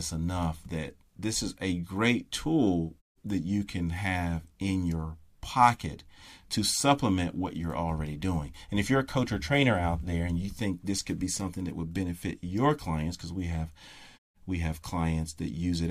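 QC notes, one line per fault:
No faults found.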